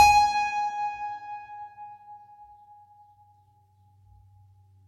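Throughout, the music sounds dull at the top, with nothing above 16 kHz. The likely cause is low-bitrate audio saved at a high bitrate: damage fitting a very low-rate HE-AAC source survives a generous MP3 re-encode, which cannot restore it.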